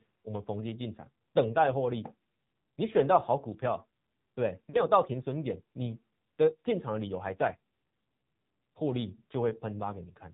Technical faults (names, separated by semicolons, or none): AMR narrowband mobile codec; lost AMR speech frames